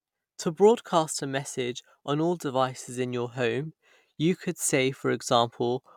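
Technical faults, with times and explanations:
Listening to this speech recording, nothing stood out as a technical problem.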